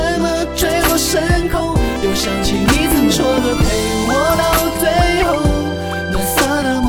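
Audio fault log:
No faults heard.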